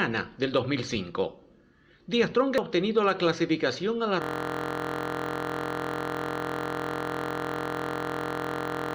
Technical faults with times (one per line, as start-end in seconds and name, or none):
2.58 damaged data in a compressed stream
4.22-8.94 system hang loop